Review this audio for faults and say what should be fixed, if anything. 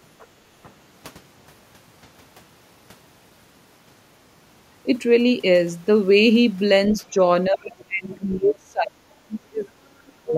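From 7.01 to 7.2 s the speech dips slightly, then from 7.5 s to the end it sinks deeply, likely speech suppressed in double talk by an echo canceller turning down both its own talker and the loudspeaker echo.

At 8.12 to 8.16 s a faint, brief scrap of a second voice slips in, likely the other side's voice leaking through from the loudspeaker.

Better echo cancellation with proper double-talk detection, or a headset, would prevent both.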